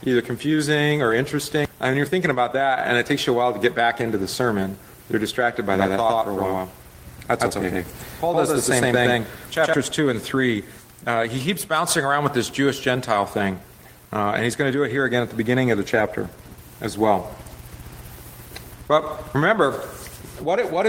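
The audio was most likely captured twice, once through a slower second path or through an edit that leaves two copies out of step, producing a doubled audio track from 5.74 s to 9.74 s. A full-band duplicate trails the original by roughly a tenth of a second at about the same level, so every sound is immediately repeated with no decay or room colour. The copy switches on and off abruptly at those times.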